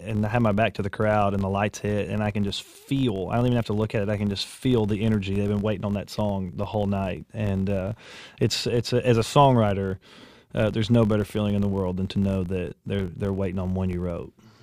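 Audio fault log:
Throughout: filter restarted on every block. There's a steady buzz at 46.9 Hz, rising and falling with the level. The filter seems to drop its state at each block boundary and restart from silence, leaving a small transient at a rate that fits a 1024-sample block.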